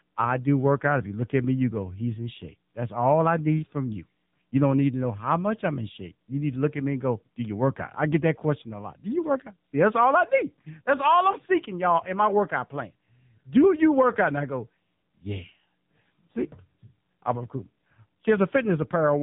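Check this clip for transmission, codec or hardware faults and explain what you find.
Throughout the speech the voice sounds buzzy, synthetic and boxed in, with nothing above 3.8 kHz: AMR narrowband mobile codec damage, whose sparse vocal-tract model and coarseness fit a low mode near 8 kbps.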